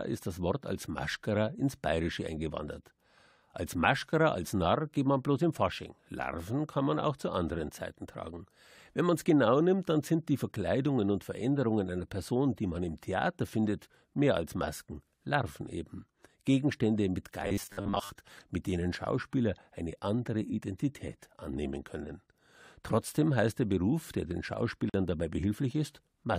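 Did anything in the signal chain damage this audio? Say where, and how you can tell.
Yes. From 17.43 to 18.10 s the speech collapses into robotic sound from repeated short buffers, most likely at the driver or buffer stage. Audio was arriving too seldom, so the software kept replaying the last short block while the real signal was skipped, for roughly 70% of that stretch. The repeats impose a rigid 100 Hz buzz, which points to a 10 ms block being looped. The speech is followed only roughly under a flat, metallic drone.

At 24.90 to 24.94 s there is a gap at a join of encoded pieces, a problem at the codec stage. Two separately encoded segments were spliced without trimming the encoder's start-up delay and the padding on the final frame, so a gap of about 45 ms opens inside continuous speech. The edges are smeared by the codec, and the speech resumes exactly where it stopped rather than skipping ahead.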